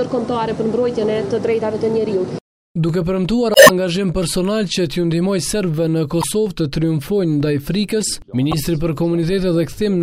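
Damaged data in a compressed stream produces glitches at 3.52–3.70 s (adding 92 ms), 6.20–6.24 s and 8.51–8.54 s.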